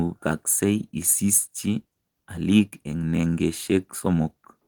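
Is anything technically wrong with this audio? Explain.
No, nothing is technically wrong with this audio.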